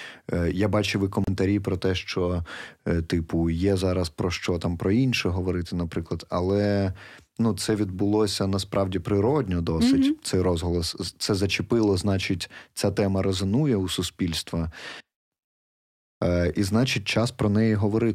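A speech clip with one brief dropout: from 1.24 to 1.27 s the sound cuts to about 30 ms of silence, then resumes. That's likely a Bluetooth stall, where the headphone buffer ran dry waiting on resent packets.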